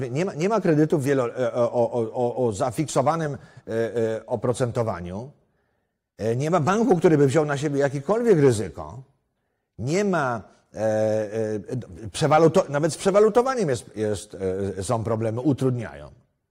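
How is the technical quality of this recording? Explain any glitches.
No technical glitches can be heard in this recording.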